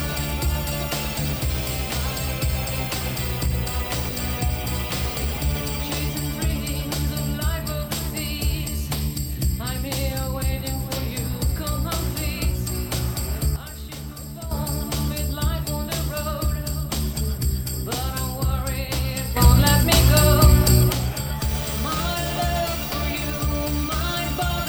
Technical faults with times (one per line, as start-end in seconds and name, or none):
13.56-14.51 sudden gain jump
19.37-20.92 sudden gain jump